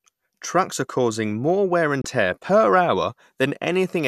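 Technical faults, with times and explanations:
2.02 to 2.05 s, digital broadcast dropout: the receiver stopped getting good data, either because the signal dropped or because a frame failed its checksum, so it muted until valid frames came back. Right after "are causing more wear" the speech fades out over about 3 ms into a short hole roughly 24 ms long, which fits a single lost frame, and resumes at "tear per". Whatever was sent during that gap is simply missing, not smeared or repeated.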